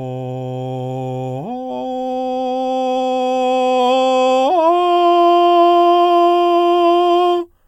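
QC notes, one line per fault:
No faults heard anywhere in the music.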